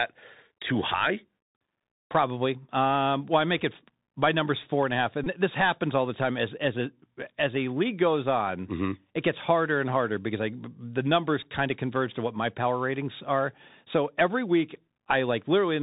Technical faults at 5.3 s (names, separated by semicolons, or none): Bluetooth CVSD headset codec; Bluetooth headset packet repeated